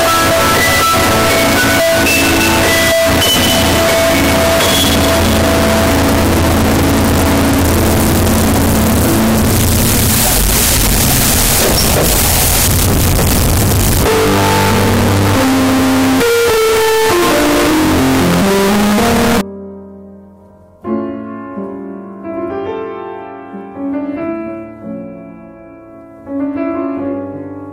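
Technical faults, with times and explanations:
0.00 to 19.41 s, float read as integer: the waveform is flattened into a near-square shape sitting at an almost fixed, high level, so the audio is extremely loud and harsh, and quiet background noise comes out as loud as the main sound, though its pitch still comes through. This is likely 32-bit float samples being read as 32-bit integers, where the sign and exponent bits, not the real amplitude, set each sample's value.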